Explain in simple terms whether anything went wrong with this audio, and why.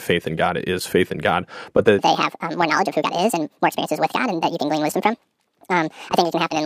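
Something did go wrong: from 1.99 s to the end of the clip, the speech plays about 1.7 times too fast, a section at the wrong speed. The voice jumps to nearly an octave higher and sounds rushed and squeaky. Because the pitch and the pace change together, this is a speed fault, not a pitch-only change, where timing would stay natural. The likely cause is that this part was played back against the wrong clock.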